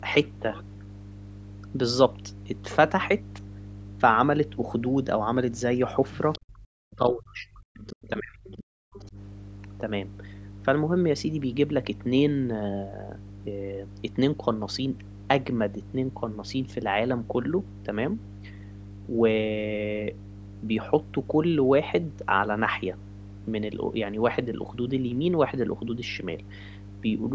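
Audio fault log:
Throughout: mains hum. There's a steady 50 Hz tone sitting under the speech the whole way, only about 10 dB below it, so it's pretty obvious. It's likely a ground loop or a nearby transformer bleeding the power line into the signal path.
6.32–6.39, 7.87–7.95, 8.45–8.57, 8.93–9.11 s: other side's voice leaking through. Short scraps of a second voice pop up, roughly 20 to 30 dB under the talker. That's likely the far end playing on a loudspeaker and the echo canceller not scrubbing it fully from the mic.
6.39–9.17 s: speech suppressed in double talk. The talker keeps dipping and cutting out in pieces, with drops as deep as around 40 dB and about two seconds lost overall. It's likely both sides talking at once, so the echo canceller ducked everything rather than separate them.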